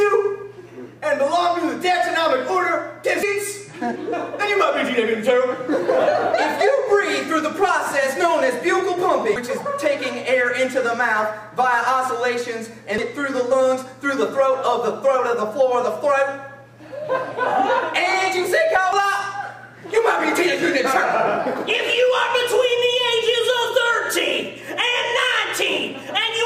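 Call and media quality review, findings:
Damaged data in a compressed stream: brief glitch at 3.23 s, 9.36 s, 12.98 s and 18.93 s. Component: decoder input path. Corrupted frame bytes are misread, the decoder loses sync and hunts for the next frame header. Spectrogram shows a short broadband or smeared vertical streak at each time. Waveform shows an abrupt discontinuity or spiky burst, with no fade, where the surrounding audio breaks off.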